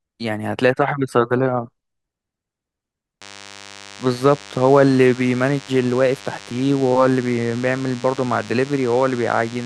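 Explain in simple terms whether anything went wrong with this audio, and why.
From 3.21 s until the end, a thin, steady buzz runs underneath the speech, quieter than the voice but always there. This is DECT cordless phone buzz. A cordless phone or its base station sitting nearby sends out a brief radio pulse 100 times a second. The recording equipment picked up those pulses and turned them into sound, so each pulse became a tick, and the rapid string of ticks blends into a constant buzz.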